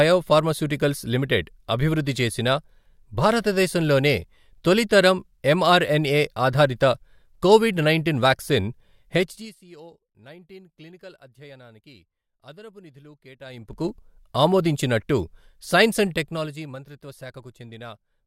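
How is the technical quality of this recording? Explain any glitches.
The recording has three episodes of zipper noise where the level is moved in audible steps. From 9.16 to 9.6 s, just after "ఆధారిత కోవిడ్ నైంటీన్ వాక్సిన్", the gain drops roughly 25 dB at around 30 steps per second. From 13.4 to 13.9 s, between "క్లినికల్ అధ్యయనానికి అదనపు నిధులు" and "ఆమోదించినట్టు సైన్స్", it rises by a similar amount. From 16.02 to 16.8 s it falls about 15 dB at roughly 10 steps per second. Each 2 dB jump is applied without smoothing, so it puts a small click into the signal, and together they form a ticking rasp over the speech.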